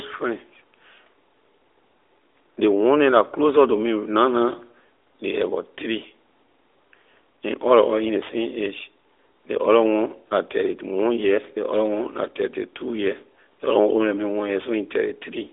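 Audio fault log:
No faults heard anywhere in this speech.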